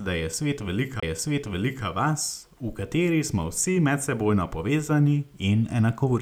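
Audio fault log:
1.00–1.03 s, CD skip: a small tick and a very brief dropout of about 20 ms, after which the speech resumes abruptly at "vas v kateri smo" with the flow broken, as though a stretch were missing or repeated. This happens when the player's laser is knocked or meets a flaw and jumps to a different turn of the disc's spiral. Playback briefly mutes and then carries on from the new position.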